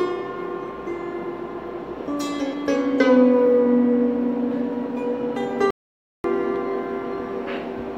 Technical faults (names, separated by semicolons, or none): playback stall